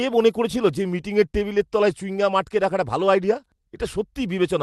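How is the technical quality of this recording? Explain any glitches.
No glitches to report: the speech comes through a call-style codec path with its top end rolling off at around 12 kHz, and nothing breaks up, drops out or distorts.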